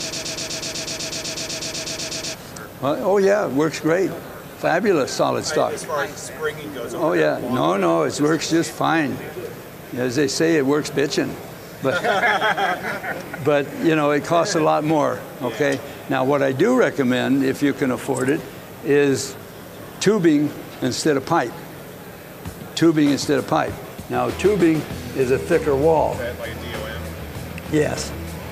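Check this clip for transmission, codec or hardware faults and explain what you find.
There's one fault here, and it's right at the top. From the very start until about 2.35 s the audio is caught in a broken-record loop that's already going when the clip begins. A fragment of about 124 ms repeats back to back, 18 times, giving a fast stutter. The likely cause is a stalled player, encoder or stream that kept resending the last chunk it held, so whatever should have played in those first couple of seconds is simply gone.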